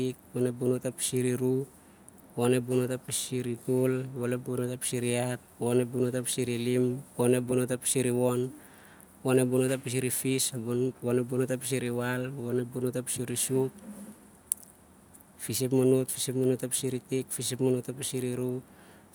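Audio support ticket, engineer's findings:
No faults found on this speech recording; nothing on the signal path needs follow-up.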